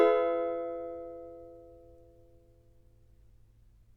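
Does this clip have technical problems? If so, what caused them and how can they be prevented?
No, nothing technical gets in the way here, so there's nothing to trace back or guard against next time.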